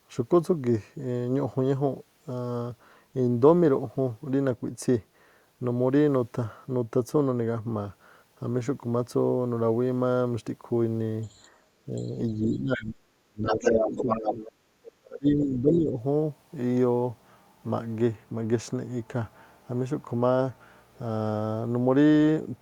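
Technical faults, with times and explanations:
11.22–11.48, 11.95–12.08, 13.43–14.52 and 14.84–14.92 s: other side's voice leaking through. A faint second voice, rising to full speech level near 14 s, likely loudspeaker echo the canceller missed.
12.43–14.08, 14.3–14.41 and 14.97–15.97 s: speech suppressed in double talk. The talker dips sharply, up to about 35 dB, likely because the canceller turned down both overlapping voices.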